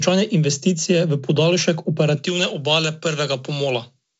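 From 2.17 s to the end, pre-emphasis is left on: the treble lift applied before transmission, here following the J.17 curve, was never undone by the matching cut, leaving the highs about 11 dB up at 10 kHz relative to 1 kHz. The sound turns thin, bright and hissy-sibilant. Unlike the light upper-band hiss of the G.722 coding, which runs through the whole clip, this is a steady rising tilt that switches on abruptly at 2.17 s.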